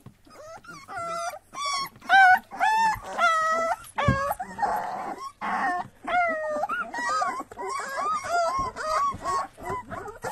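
Everyday sounds, with an adaptive stream dropping to a lower bitrate from 3.77 s to the end. Quality changes suddenly without a gap. Codec artefacts rise and nothing remains above 12.3 kHz, which points to a slowed connection.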